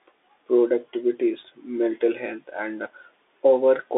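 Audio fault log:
throughout: Bluetooth CVSD headset codec, speech held to 300 Hz–3.6 kHz with nothing above 3.8 kHz, plus granular hiss and scratchy s sounds that plain telephone band-limiting lacks.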